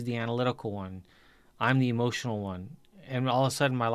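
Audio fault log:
No technical faults are detected anywhere in this speech recording.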